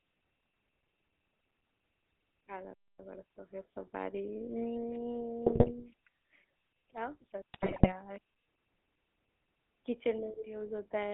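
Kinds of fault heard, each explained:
GSM full-rate codec: The speech has been squeezed through the first GSM speech coder, which models the vocal tract and excites it with sparse pulses. The whole clip is buzzy and gravelly, and the line passes only about 250 Hz to 3.5 kHz.
Playback stall: At 2.74 s the speech drops to silence for about 257 ms, resuming at 2.99 s. The output simply stops mid-flow and then carries on. The likely cause is the player running short of data or having its thread blocked.
GSM bit errors: Corrupted bits reached the GSM decoder, so filter, pitch or gain values came out wrong for whole frames. From 5.46 to 5.71 s, and again from 7.54 to 7.93 s, the speech breaks into squawks, pops and gargling.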